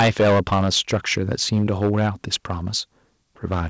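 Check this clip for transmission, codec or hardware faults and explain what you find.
There's one real problem here: microphone overload, from 0.0 to 2.35 s and again briefly at 3.52 to 3.56 s. The input was likely set too hot, so peaks ran about 16 dB past the converter's ceiling (about 2 dB in the short second burst) and got their tops flattened, with several percent of samples clipped. That's the harsh, crackly edge on the loudest syllables. The call path itself tops out around 8 kHz, which fits a wideband codec like G.722.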